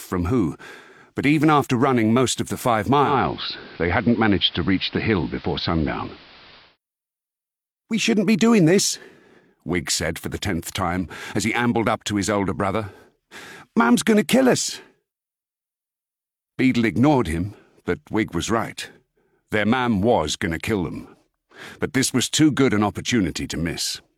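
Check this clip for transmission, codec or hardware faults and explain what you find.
One fault: the digital radio blends to analogue from 3.02 to 6.78 s. The hybrid receiver lost the digital stream and cross-faded over about 220 ms to the AM broadcast, so the level shifts by about 3 dB, and hiss sits roughly 25 dB below the signal.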